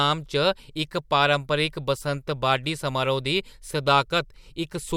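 Listening through the speech recording, nothing stood out as a technical problem at any point.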